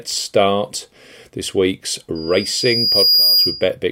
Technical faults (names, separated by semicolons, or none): loudspeaker feedback squeal